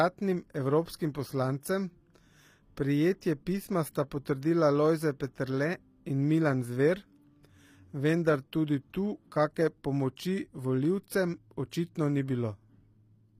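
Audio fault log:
throughout, HE-AAC compression: the treble sounds gritty and metallic, with plainly audible codec damage, likely from HE-AAC at a low bitrate around 24 kbps. Upper bands are rebuilt by copying lower ones. A spectrogram shows blocky, smeared treble and nothing above 15.5 kHz.
10.16 s, pre-echo: a brief hiss of about 11 ms smears in just ahead of a sharp onset, because the block's quantisation noise, sized for the loud attack, spills into the quiet moment before it. The waveform shows noise leading the transient.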